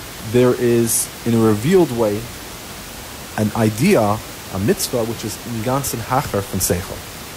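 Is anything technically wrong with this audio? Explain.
No, nothing is technically wrong with this audio.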